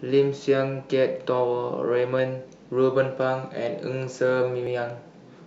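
At 2.19 s and 4.67 s the speech skips, losing about 20 ms each time. The likely cause is audio missing between 2.5 s chunks, rejoined without a gap.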